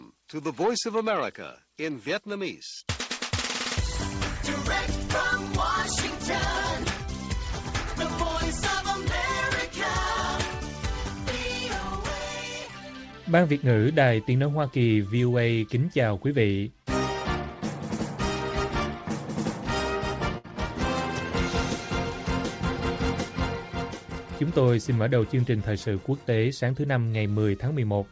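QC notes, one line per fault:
20.38–20.46 s, burst of packet loss: 60 ms lost; the receiver stretched and faded the last sound, then resumed beyond the missing stretch.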